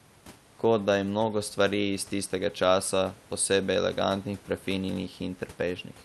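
No technical faults are audible.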